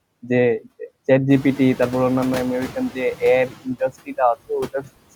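Speech recorded with background room noise, which rises by about 14 dB at around one and a half seconds and then sits about 19 dB below the voice. Noise suppressor artifacts run through the whole clip. The suppressor cuts bands it judges to be steady noise, frame by frame, by about 17 dB. So the background drops away in the gaps and swells back up under the speech.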